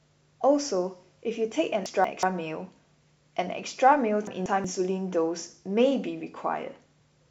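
It's a speech clip with chunks out of order twice, at 1.86–2.23 s and 4.27–4.64 s. Each time a roughly 186 ms block lands one chunk late, after its neighbour, so the sound jumbles briefly across three hard joins.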